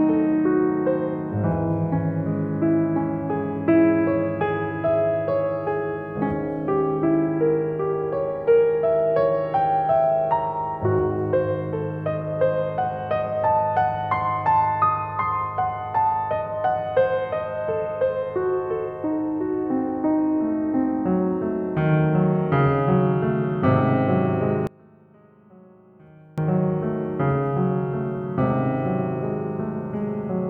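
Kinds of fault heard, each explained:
One channel inverted: From 24.67 to 26.38 s the music drops by about 27 dB and turns faint, with centred parts nearly gone. The likely cause is one stereo channel flipped in polarity, cancelling shared content when summed to mono.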